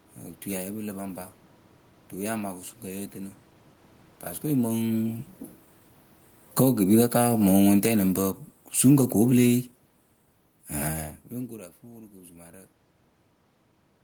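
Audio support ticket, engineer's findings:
Automatic gain falling, 6.41 to 11.05 s: level sinks about 11 dB over roughly 4.6 s. AGC reacting to loud input or strong background noise, ramping gain down. Distinguishing cue: room noise drops along with the voice. At the talker movements near 4.5 s and 11 s, only the voice level shifts while the background stays constant.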